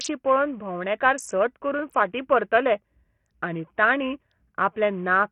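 Bluetooth SBC compression runs throughout this short speech clip, and the heavy damage likely comes from that codec at a starved bit pool, which fits a bitrate of about 48 kbps. The upper sub-bands receive too few bits to hold steady, so the treble flickers in and out rather than sitting cleanly below the 21 kHz ceiling. Coarse quantisation in the remaining bands lays a gritty, rough noise and aliasing over the speech from start to finish.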